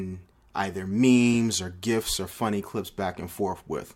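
At 1.34 s a corrupt frame decoded: damaged bits in roughly two frames were played anyway, throwing energy to wrong frequencies as a brief glitch peaking around -25 dBFS. A fainter one-frame glitch follows at 2.99 s.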